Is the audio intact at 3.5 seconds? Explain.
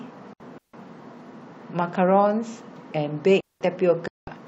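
No. At 3.5 seconds the speech falls into a clean hole of near silence lasting about 0.2 s, from 3.41 to 3.61 s, with no noise burst on either side. This is a digital wireless dropout: the receiver lost too much data and briefly muted.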